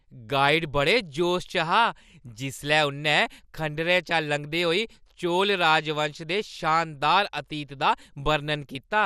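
Throughout the speech, the likely cause is MP2 compression at a low bitrate, one that fits about 80 kbps. Starved of bits, the encoder drops upper sub-bands or lets them flicker and coarsely quantises the rest, so the sound is dull, with plainly audible gurgling, granular distortion.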